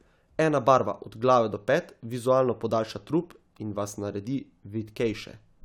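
Listening closely to the recording, nothing stood out at any point.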